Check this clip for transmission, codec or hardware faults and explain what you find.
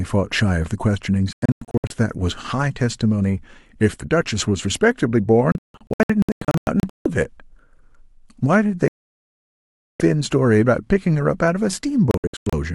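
Digital broadcast dropout occurs four times, at 1.33 to 1.91 s, 5.52 to 7.06 s, 8.88 to 10.01 s and 12.11 to 12.53 s. The receiver lost valid frames and muted until good ones returned, so the speech breaks into short silent holes up to 160 ms long in three of these stretches and one solid gap of about 1.1 s around 9 s. Whatever was said in those stretches is simply missing.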